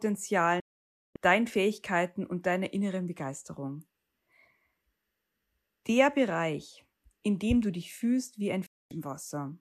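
At 0.60 s the speech cuts to silence within about 3 ms and returns at 1.16 s. At 8.66 s, right after "du dich fühlst wie", it cuts again for about 0.25 s. Both are digital broadcast dropouts: the receiver muted on failed frames, and everything sent during each gap is lost.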